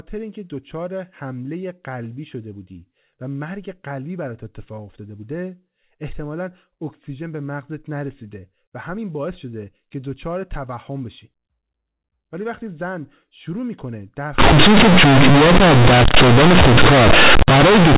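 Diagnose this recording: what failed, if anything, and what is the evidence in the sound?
Companded audio read as linear, 14.38 to 17.97 s: sample-format conversion plays mu-law bytes as plain 8-bit samples without expansion, making speech loud and buzzy.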